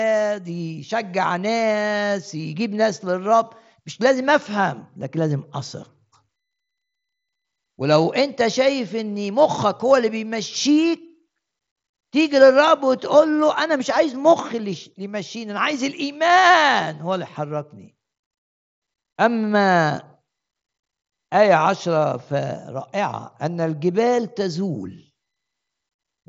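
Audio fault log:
No faults heard in this clip.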